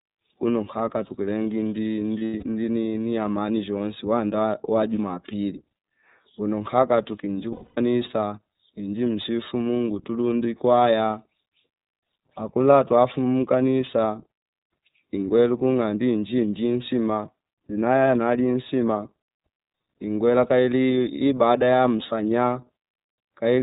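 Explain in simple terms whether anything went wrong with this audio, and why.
The iLBC codec shapes the whole recording, from start to finish. This is a phone-style voice codec that keeps only the lower part of the sound, nothing above 4 kHz, so the speech is narrow and muffled and lacks the crisp hiss of sounds like s. It rebuilds each short slice of audio separately from a simplified model, which leaves the speech clear but noticeably rough and slightly synthetic throughout.

Lost iLBC frames cause two brief dropouts, from 2.19 to 2.44 s and from 7.52 to 7.78 s. In each, chunks of the stream went missing, and the decoder covered the holes by repeating the last bit of speech it had, blended with noise. The gaps are scattered across about a quarter of a second, the longest about a tenth of a second. They sound like a held, buzzy or breathy vowel, and the voice snaps back almost at once.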